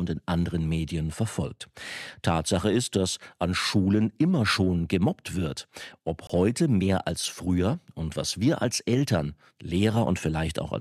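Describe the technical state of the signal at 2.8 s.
At 2.8 s the signal is intact, with no dropout, clipping, distortion or other technical fault to be heard at that moment.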